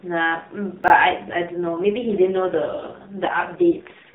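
Between 0.84 and 0.90 s there is a brief jumbled stutter. This is chunks out of order. One 20 ms chunk arrived late and plays after the two chunks that should have followed it. No audio is missing, but that 60 ms stretch runs in the wrong sequence. The three abrupt joins between mismatched waveform edges produce the garbled blip.

From 1.12 s to the end of the clip at 4.15 s, the speech turns rougher, buzzier and more synthetic. The band stays the same and nothing drops out. This is an AMR rate drop. The sound points to the link switching the AMR narrowband codec from its 12.2 kbps mode down to about 4.75 kbps and spending the freed bits on error protection. With so few bits for each 20 ms frame, the vocal-tract model is driven by very sparse pulses, which gives the coarse, artificial quality. The narrowband ceiling at 4 kHz is present throughout, both before and after the drop.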